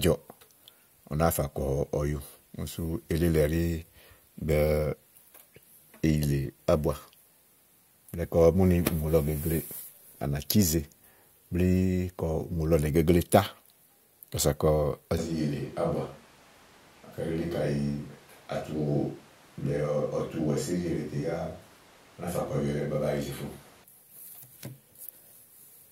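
A switch to a distant microphone runs from 15.18 to 23.84 s. At 15.18 s the speech abruptly turns roomy and hollow, loses low end, and drops by roughly 5 dB, while background noise rises to about 25 dB below the speech. The likely cause is that the close microphone's signal failed or was dropped, leaving a pickup farther away that captures more room reflection. At 23.84 s the close, full sound returns just as suddenly.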